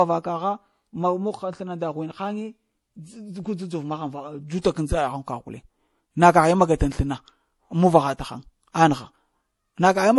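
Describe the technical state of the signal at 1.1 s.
At 1.1 s, as throughout, the speech stops at 11.5 kHz and carries stacked artefacts from both codecs, likely from transcoding between lossy codecs, MP3 re-encoded as AAC.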